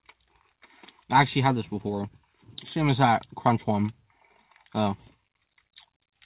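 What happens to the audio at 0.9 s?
Nothing goes wrong at 0.9 s; the audio runs through intact there, carried by a telephone-style call path whose band stops at about 4 kHz.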